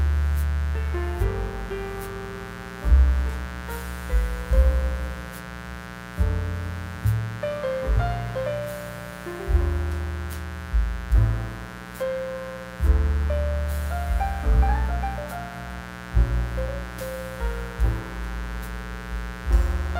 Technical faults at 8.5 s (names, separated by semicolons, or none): mains buzz